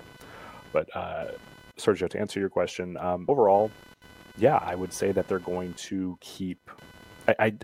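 A speech clip with a buzzy, chirpy computer activity noise running under it the whole way, pulsing at around 500 times a second and sitting roughly 25 dB below the speech. It tracks the machine's processor or mouse load rather than the talking, because those load swings are jostling the shared ground in the audio circuit. At 3.28 s, right after "answer your question um", there's a quick blip from damaged data in the compressed stream. The decoder hit corrupted frames, lost sync and skipped ahead to find the next good frame header.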